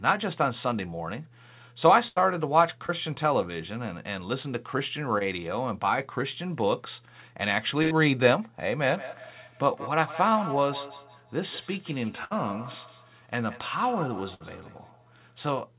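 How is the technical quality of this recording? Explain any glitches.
The recording has several network-related glitches and an echo problem in its second half. It is band-limited to roughly 4 kHz, which fits a narrowband G.711 mu-law call path at 64 kbps.

Burst of packet loss at 2.08–2.18 s, 7.82–7.93 s, 12.25–12.35 s and 14.34–14.42 s. Runs of consecutive packets arrived too late or not at all, about 80 ms in the first two events and 60 ms in the last two. The receiver extended the last sound and faded it, producing a held buzz or hiss, and the speech resumes with that stretch missing.

Short concealed packet loss at 2.86–2.91 s and 5.18–5.22 s. Each time about 20 ms failed to reach the decoder. The receiver synthesised a continuation and blended back into the real signal, which is heard as a brief smear or wobble in the speech.

Feedback echo between two devices from 8.84 s to 15.53 s. 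A second device in the same room is replaying the call, and the first microphone picks it up again. Each device's echo canceller ignores the other's playback, so the speech returns roughly every 150 ms, thin and ringing, peaking at about 14 dB below the direct speech.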